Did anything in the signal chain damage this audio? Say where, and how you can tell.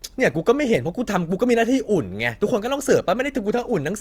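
Yes. Two devices in the chain are likely running on unsynchronised clocks, and at about 200 ppm mismatch a single sample is dropped or repeated roughly every tenth of a second. These clock slip clicks sound as faint regular ticks through the speech from 0.16 to 3.94 s.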